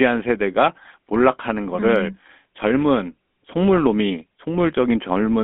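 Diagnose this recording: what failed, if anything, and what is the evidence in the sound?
The failure is at the codec stage: the speech has passed through the GSM full-rate codec for its whole length. The encoder fits the voice to a vocal-tract model and drives it with a sparse, regularly spaced pulse train, which discards most of the fine waveform detail and fits a 13 kbps stream. The result is a plainly audible buzzy, gravelly roughness, confined to a telephone band of roughly 200 Hz to 3.5 kHz.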